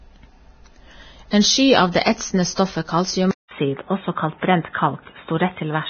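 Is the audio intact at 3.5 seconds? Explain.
No. Around 3.5 s the speech is damaged in three overlapping ways.

From 3.48 to 3.51 s a short burst of hiss runs ahead of a sharp attack, and the attack itself sounds softened and smeared. This is pre-echo. The codec spreads its quantisation noise across a whole transform block. When the onset lands late in that block, noise sized for the loud part fills the quiet 32 ms before it.

That moment also sits inside a change of input. At 3.31 s there is a gap of about 200 ms, after which the sound continues to the end on a different footing. The band is narrower, the tonal character is different, and a new background noise sits about 40 dB below the signal, while the overall level stays roughly the same. The likely cause is an input switched to a poorer device mid-recording, such as another microphone or a headset's call profile, with its own band limits and noise.

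Across the whole clip, including this point, the sound is heavily grainy and hissy. Tones are roughened, attacks are blurred, and nothing is present above 6.5 kHz. This likely comes from Vorbis compression at low quality, which fits a bitrate of around 16 kbps. At that setting the codec lowers its cut-off and quantises the remaining treble so coarsely that fine detail turns into noise of similar energy.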